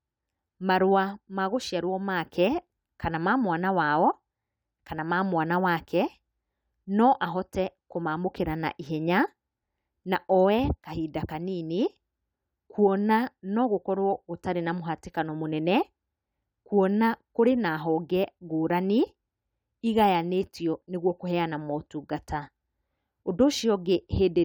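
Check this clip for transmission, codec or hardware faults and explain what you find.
Nothing in the speech points to a fault of any kind. No moment in the recording calls for comment.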